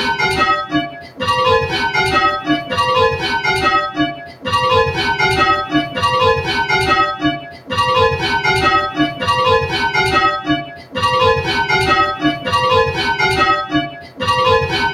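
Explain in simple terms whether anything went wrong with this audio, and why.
A noise suppressor applied to music or sounds was left on the whole time. It was made for speech. So it mistakes steady tones and fading tails for noise. The level keeps dipping and recovering, which makes the sound pump and thin out.

Sound cut by the noise suppressor is clearest at 0.65–1.22, 3.91–4.47, 7.16–7.72, 8.91–9.23, 10.41–10.97 and 13.66–14.22 seconds. In these stretches held sound sinks sharply or fades out too early. The dip at 8.91 seconds is milder.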